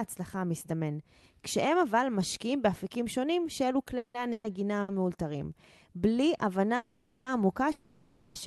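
Just before 4 seconds the speech hangs: from 3.97 to 4.16 s the last sound is drawn out as a fading buzz and then goes quiet for about 100 ms, and from 4.32 to 4.46 s it happens again with a shorter silent tail. These are likely call audio freezes, where the jitter buffer ran dry waiting on held-up packets. Speech resumes where it stopped, so the breaks add gaps without losing anything.

At 4.82 to 4.90 s there's a short stall from a late packet. One sound is stretched for about 60 ms with a slight buzzy dip until the packet shows up, then playback picks up from the same spot.

The longer freezes come later. From 6.76 to 7.28 s the held sound lasts about half a second, and from 7.72 to 8.37 s it lasts about 630 ms, fading into a smeared drone without ever falling fully silent.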